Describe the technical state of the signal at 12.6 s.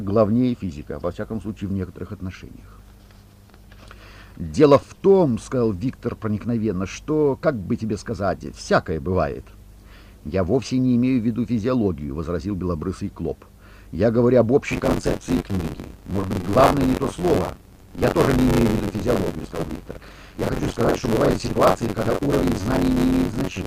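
At 12.6 s the signal is intact, with no audible fault at that moment.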